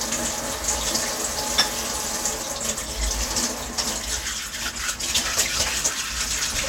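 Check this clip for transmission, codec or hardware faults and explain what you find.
Listening closely, I hear no faults anywhere in the recording. There is nothing here that needs explaining.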